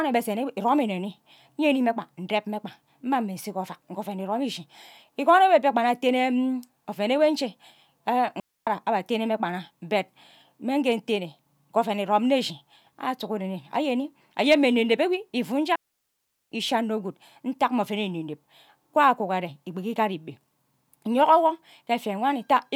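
At 8.40 s a digital wireless dropout occurs: the radio link loses too much data for the receiver to rebuild, so it mutes for 270 ms, until 8.67 s, just before "atene mme". The sound fades out almost instantly and leaves a clean hole with no crackle on either side. A second, longer dropout runs from 15.76 s to 16.52 s, about 760 ms of near silence, ending just before "ishi anno guud ntak".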